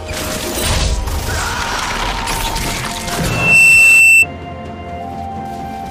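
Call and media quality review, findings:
Single piercing tone at 2.7 kHz, 3.27 to 4.26 s. Swells over about a third of a second, peaks roughly 15 dB above the programme audio, then stops. Loudspeaker feedback squeal: the mic is picking up its own loudspeaker, and loop gain exceeds unity at 2.7 kHz. Check mic/speaker placement, monitor gain and EQ at that frequency.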